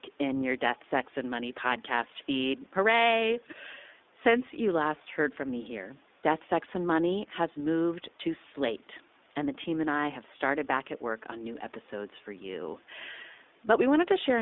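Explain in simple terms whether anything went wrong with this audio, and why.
The speech sounds thin, muffled and a bit rough and robotic from start to finish. That's the iLBC codec, a phone-call compression scheme that rebuilds the sound in 20 ms chunks and keeps only roughly 250 Hz to 3.6 kHz, discarding the brightness above.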